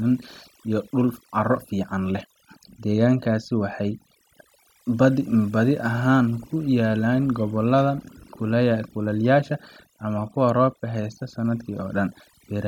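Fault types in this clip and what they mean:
Overdone noise removal: the background between phrases drops to near silence dotted with brief twinkling specks. A noise reduction stage set far too aggressively is cutting individual frequency bands down or out whenever their level sits close to its noise estimate, so the quieter parts of the speech are removed along with the noise, leaving isolated fragments that flicker in and out.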